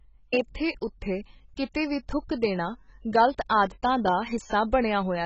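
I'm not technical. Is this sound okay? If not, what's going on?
No. The speech sounds dull and smeared all the way through, with nothing above 7.9 kHz and a fizzy, swirly edge that plain muffling lacks, likely from heavy AAC compression.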